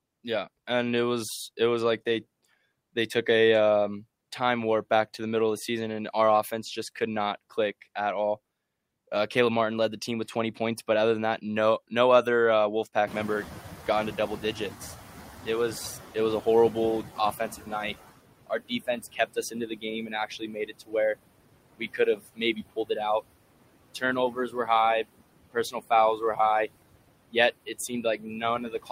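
A speech recording with noise suppressor artifacts throughout: the suppressor pulls steady background down by about 20 dB frame by frame, so the residual noise dips between phrases and swells under the voice. Around 13 s, just after "no no other uh", the room noise jumps by about 23 dB to sit about 14 dB below the speech, and the noise suppressor is catching up from 13.07 to 18.03 s. Its noise estimate takes nearly 5 s to adapt, so the louder background passes with weaker reduction before settling at about 15 dB of cut. Toward the end of this catch-up, speech is cut by the noise suppressor, which treats parts of the voice as noise. This happens at 17.39–17.95 s (about 11 dB), 18.47–21.16 s (about 20 dB), 21.78–22.97 s (about 21 dB), 23.94–24.68 s (about 12 dB), 25.53–26.39 s (about 18 dB) and from 27.32 s to the end (about 16 dB). Soft syllables and word endings sound swallowed, most extensively in the 18.47–21.16 s stretch, where around a second of speech is affected.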